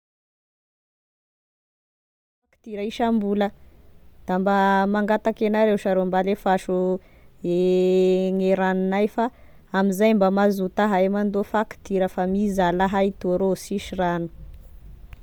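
Speech with a plainly audible breathy, grainy edge throughout, likely from Bluetooth LC3 compression, whose noise-filled upper spectrum at around 48 kbps with 10 ms frames roughens the voice. The smooth fade-in, from around two and a half seconds to 3.34 s, is clean.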